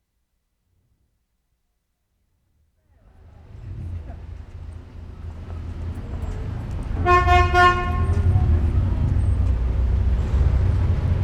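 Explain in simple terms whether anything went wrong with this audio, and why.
Nothing went wrong here.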